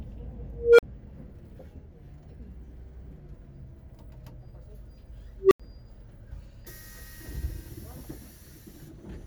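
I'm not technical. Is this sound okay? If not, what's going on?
No. An unstable filter misfires at 0.53 s and 5.39 s: a processing loop feeds on itself, so a mid-pitched beep swells very loud within a fraction of a second, then briefly drops out.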